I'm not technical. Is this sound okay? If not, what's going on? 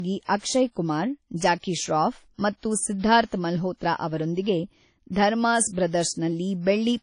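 No. The speech was most likely saved first in a small, heavily squeezed format and then resaved as a large, high-quality file, a problem called low-bitrate audio saved at a high bitrate. The resave can't recover what was lost, so throughout the clip nothing is heard above about 10.1 kHz, leaving it dull.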